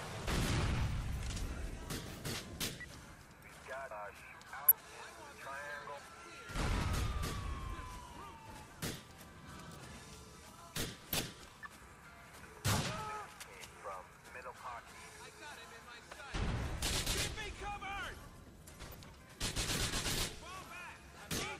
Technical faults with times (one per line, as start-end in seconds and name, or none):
4.68-4.71 DAB burbling
11.13-11.23 DAB burbling
18.81-19.09 DAB burbling